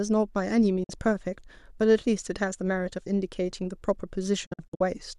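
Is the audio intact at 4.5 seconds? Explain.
No, a digital broadcast dropout runs from 4.46 to 4.81 s: the receiver muted on failed frames, leaving several short silent holes, each under 50 ms, with quick fades.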